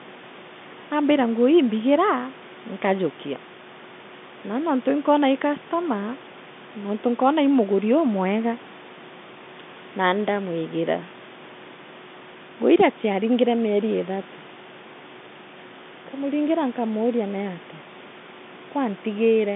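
Nothing is technically wrong with this speech clip: it carries ordinary telephone-band call audio with no faults to report.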